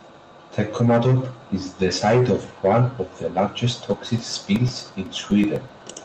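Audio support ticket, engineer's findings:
Regular ticking, eight per second, 3.94 to 5.94 s, starting just after "one of the largest". Around fifteen ticks, heard only over the speech. Each is a short silent gap of about 2 ms. Probable periodic USB or driver dropouts: a background task stalls the bus or audio driver every 125 ms, and each stall blanks a slice of audio.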